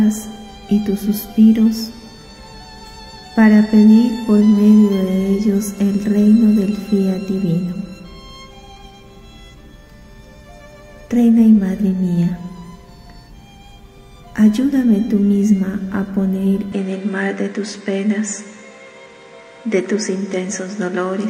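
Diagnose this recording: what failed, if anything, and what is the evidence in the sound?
At 16.72 s the sound turns duller and a few decibels quieter with no gap, and nothing remains above 9.7 kHz. This likely comes from the input switched to a poorer device at the capture driver. On a spectrogram the top band ends abruptly, over a new faint noise floor.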